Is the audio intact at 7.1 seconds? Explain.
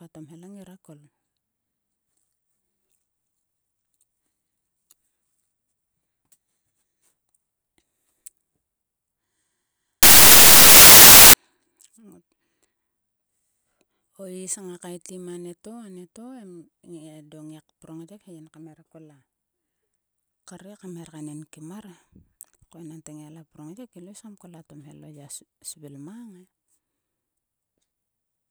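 Yes, the speech at 7.1 seconds plays through intact, with no dropout, click or other fault at that moment.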